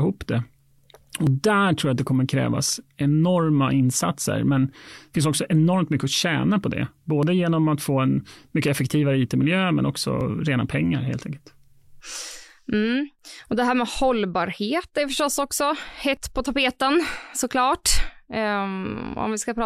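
In this speech clip, audio is missing between chunks, likely because the recorder drops a sliver while switching roughly every 3 s, causing brief skips of about 20 ms at 1.27, 7.23, 10.21, 13.19 and 16.17 s, one just before "på tapeten såklart".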